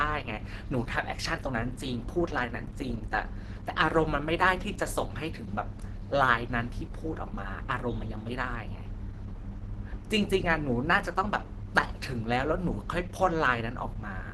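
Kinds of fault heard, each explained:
Opus compression: throughout, the speech sounds plainly muffled and hoarse with nothing above 12.2 kHz, likely a speech-oriented hybrid Opus mode at roughly 16 kbps.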